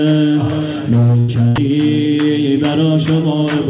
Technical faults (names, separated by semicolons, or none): burst of packet loss; sound dropped by the voice detector